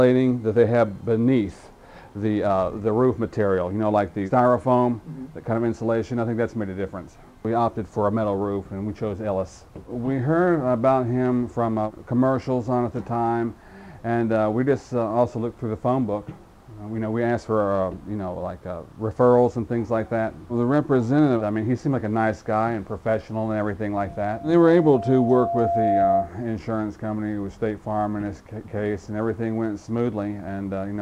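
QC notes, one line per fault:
24.07–26.33 s, loudspeaker feedback squeal: a steady 686 Hz tone swells over about two seconds to roughly 5 dB above the sound, as the mic-to-speaker loop exceeds unity gain.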